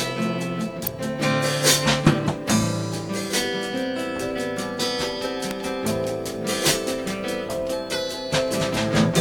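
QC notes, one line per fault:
0.87 s and 5.51 s, electrical switching spike: two isolated snaps, each lasting only a few milliseconds and peaking around -5 dBFS, sitting on top of the music rather than interrupting it. The likely cause is a nearby switch, motor or static discharge arcing briefly, with the burst coupled into the audio line as a sharp impulse that has no relation to the musical content.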